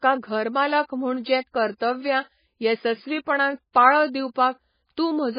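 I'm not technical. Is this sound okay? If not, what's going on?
No. Throughout the speech, everything above 5 kHz is gone, so it sounds dull and muffled, with a watery, swirling quality and smeared, chirpy s sounds. The likely cause is heavy MP3 compression, which cut the treble and discarded weak detail to save data.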